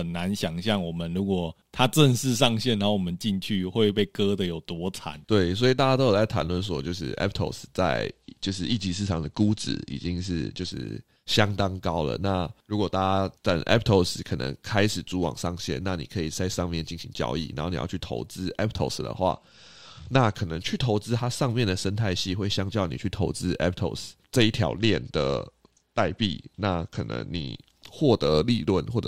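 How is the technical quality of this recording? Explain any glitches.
The recording has a recurring Bluetooth SBC bit pool drop at 8.09 to 10.72 s, 19.31 to 20.34 s and 24.68 to 27.58 s. Each time the speech goes dull and gritty, which points to the link squeezing the bit pool from around 31 down to 12, roughly 88 kbps. That starves the upper sub-bands and coarsens the rest until the rate recovers.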